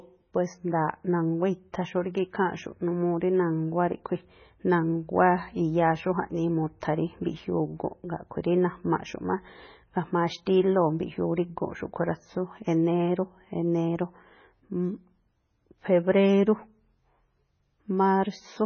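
Throughout, the speech stops dead above 6.6 kHz and sounds watery and swirly with smeared onsets, likely heavy MP3 compression starved of bits, consistent with about 16 kbps.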